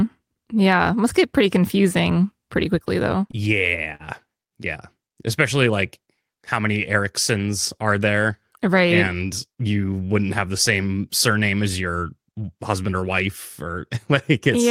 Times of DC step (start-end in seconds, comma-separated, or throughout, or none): none